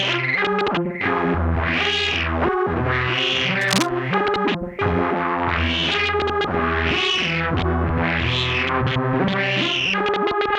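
From 3.61 to 3.89 s a cable scratch noise burst rides over the sound, only slightly quieter than it. The dense, uneven rustle likely comes from a worn cable or connector shifting its contact. A spectrogram shows ragged broadband streaks, and the waveform shows jagged spikes.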